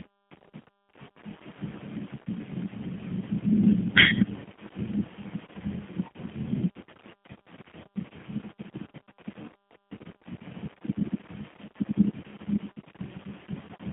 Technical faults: G.729 codec

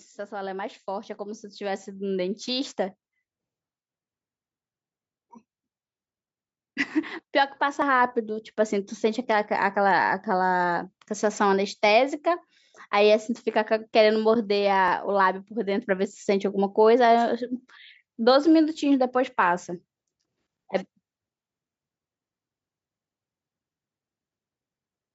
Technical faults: automatic gain rising; dropped buffer (overrun)

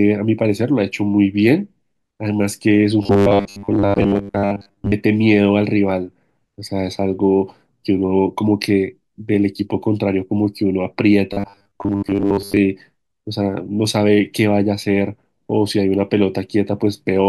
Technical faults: robotic sound from repeated short buffers

